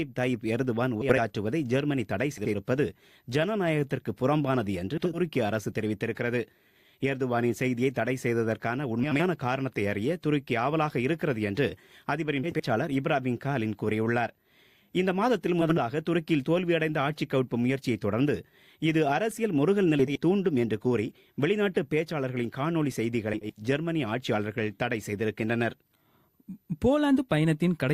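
At 1.01–1.18, 2.37–2.55, 4.97–5.19, 9.03–9.23, 12.43–12.61, 15.61–15.80, 20.00–20.18 and 23.33–23.54 s, frames are out of order. Two adjacent blocks of about 80 ms each, which fits four 20 ms frames apiece, play in swapped order, producing a brief garbled flutter. Unlike a dropout or a repeat, nothing goes missing or doubles, and the timing afterwards stays intact.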